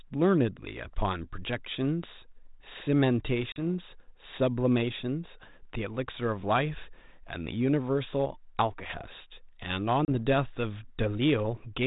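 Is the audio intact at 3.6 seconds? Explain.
No, it isn't. There's packet loss on an ADPCM call running from 3.52 to 3.62 s: about 40 ms of audio drops out as a hard-edged silence. The decoder's predictor and step size then lag the sender's, so the speech comes back with a bit of distortion before settling.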